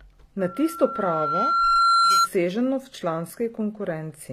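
Throughout the speech, sibilants sound gritty and metallic, the treble bright but synthetic, with nothing above 14.9 kHz. This is likely HE-AAC compression: the upper band is rebuilt by copying lower bands upward, as fits a low bitrate around 24 kbps.

From 0.39 s to 2.28 s a single 1.4 kHz tone swells over about a second and a half into a squeal roughly 10 dB above the speech. This is loudspeaker feedback squeal: the microphone caught its own loudspeaker, and the loop gain at that frequency exceeded one.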